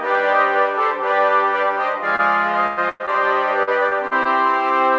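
At 2.16 to 2.21 s a short concealed packet loss leaves a brief smear. About 20 ms of audio never arrived in time, and the receiver bridged roughly 27 ms by extending the preceding sound before blending back into the real signal. A second one at 3.06 to 3.09 s is even tighter, with about 14 ms patched. It registers as a smear or wobble rather than a gap, which separates it from the longer dropouts nearby.

At 2.67 to 2.79 s and again at 2.89 to 3.02 s comes a burst of packet loss, each removing about 100 ms. The receiver kept extending the last sound for roughly 105 ms while turning it down, so it comes out as a held, fading tone or hiss rather than a click. Playback never falls fully silent. What gives them away is that the audio resumes further along, with a clear chunk missing, which a brief concealment doesn't leave.

From 3.63 to 4.27 s there is repeated packet loss with a robotic sound. 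Four separate holes, the longest about 40 ms and together about 120 ms, are each patched and quickly followed by the next, so about a fifth of that stretch is synthetic. Unlike a single burst, the damage is spread out, giving a choppy stutter across the whole passage. Throughout, the call path's band limit leaves nothing above 8 kHz, which fits a G.722 codec.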